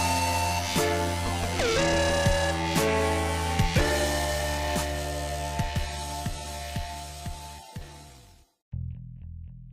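Nothing in this audio stood out as a technical problem on listening.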